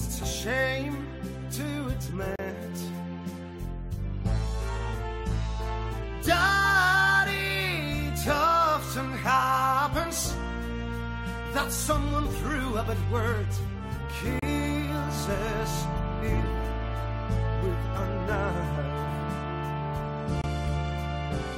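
Timestamps between consecutive 6-second stream segments leave a gap between stream segments, and the player fills each one with silence: hard-edged holes at 2.36–2.39 s, 14.39–14.42 s and 20.42–20.44 s, lasting 24 to 33 ms, while nothing is lost.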